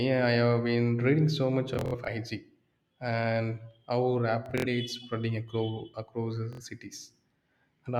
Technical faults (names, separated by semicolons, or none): Bluetooth stutter